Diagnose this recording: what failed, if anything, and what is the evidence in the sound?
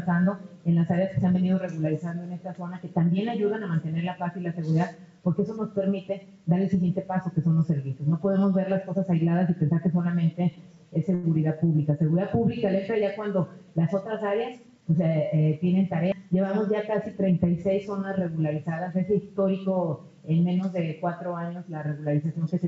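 A packet arrived late on the network side of this call and the jitter buffer ran dry at 11.15 s. Rather than leave a gap, the receiver held the last sound for about 85 ms until the packet turned up, then resumed where it had stopped, so nothing is lost. The evidence is a short stall from a late packet between 11.15 and 11.26 s: one sound sustained slightly too long.

Later the jitter buffer was holding more than its target, and the receiver cut the excess with a jitter buffer speed-up between 14.48 and 14.95 s. It repeatedly dropped pitch-period-length slices, about 70 ms in total, so the sound plays at roughly 112% speed for that half second with its pitch unchanged. It comes across as briefly rushed. Like the rest of the clip, it passes through the G.722 call path, with nothing above 8 kHz.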